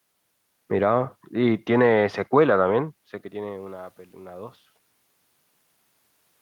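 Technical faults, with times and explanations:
2.72 to 4.60 s, automatic gain rising: just after the talker moves back from the microphone around 3 s, the input falls by about 18 dB, and the gain control answers by gradually raising its gain about 4 dB over nearly two seconds. The tell is the room noise: it swells together with the voice during the climb, whereas the talker moving alone lowers only the voice and leaves the background level unchanged.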